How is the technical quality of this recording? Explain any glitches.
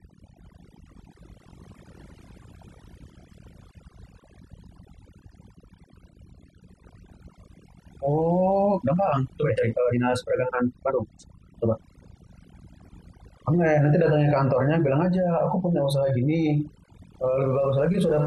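The recording has two clear faults: heavy-handed noise reduction across the whole clip, and one passage that plays noticeably faster than the rest.

Overdone noise removal runs throughout. The processing pushed individual frequency bands down wherever they resembled the noise floor, taking quiet parts of the speech with them. The background becomes near-silent with twinkling specks. A spectrogram shows scattered isolated dots and patchy, hollowed-out harmonics.

A time-stretched section runs from 8.62 to 12.36 s, where the speech is sped up about 1.69 times without any change in pitch. This is likely the result of software compressing the passage to fit a length by dropping short slices. It sounds rushed, and the waveform shows syllables packed unnaturally close together.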